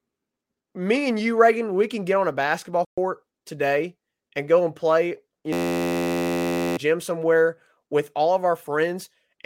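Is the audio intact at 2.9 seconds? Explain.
No. A playback stall runs from 2.85 to 2.98 s: after "get on a basketball" the speech cuts to silence for about 127 ms, then resumes with "today and go and". The likely cause is the player running short of data or its thread being briefly blocked.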